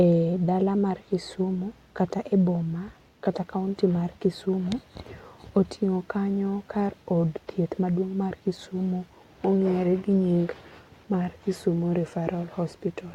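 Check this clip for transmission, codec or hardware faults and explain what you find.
No faults can be heard anywhere in the speech recording. There is nothing in the audio that calls for a fault to be explained.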